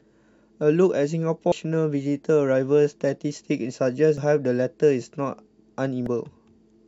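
Damaged data in a compressed stream at 1.52 s, 4.18 to 4.21 s and 6.06 s: corrupted frames make the decoder lose sync and hunt for the next header, leaving brief glitches in the speech.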